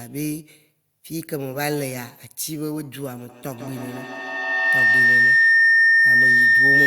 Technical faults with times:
3.29-6.87 feedback howl

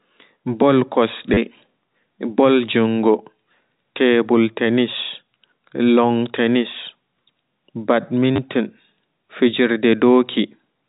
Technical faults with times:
1.34-1.37 packet loss with last packet repeated
8.36-8.38 packet loss with last packet repeated

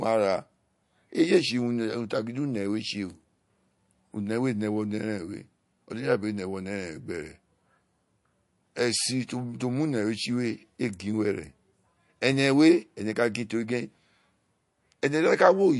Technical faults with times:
0.00-15.79 MP3 compression

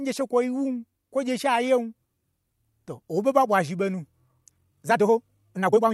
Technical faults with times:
4.26-5.94 time-stretched section

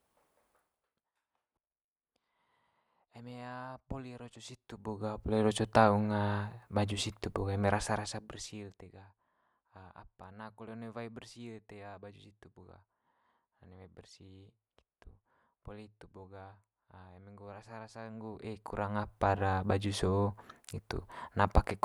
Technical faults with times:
none

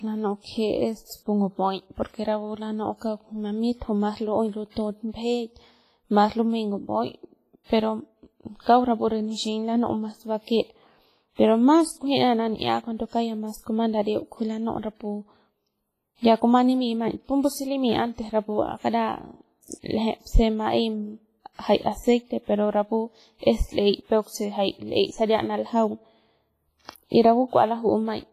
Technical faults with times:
0.00-28.32 WMA compression
8.61-8.66 pre-echo

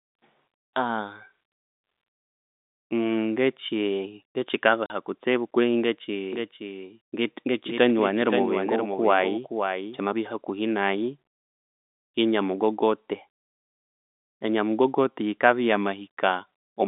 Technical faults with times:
4.86-4.90 packet loss filled with silence
6.33-9.99 doubled audio track

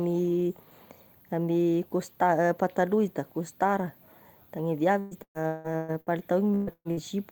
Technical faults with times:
4.99-6.10 repeated packet loss (robotic sound)
6.55-7.00 burst of packet loss

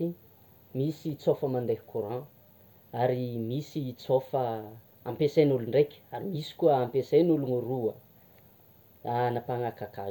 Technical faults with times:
none

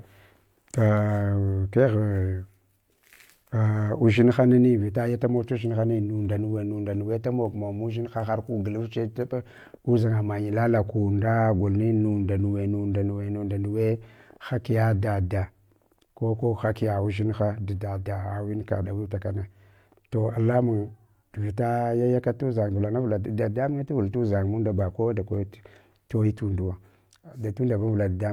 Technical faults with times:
none

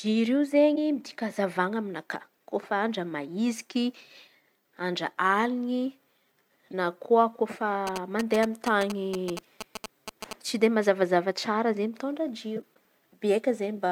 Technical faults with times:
7.87-10.33 GSM signalling bursts

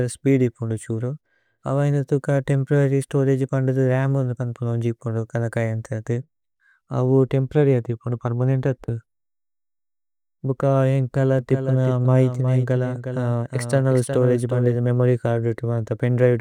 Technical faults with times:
11.39-14.75 doubled audio track

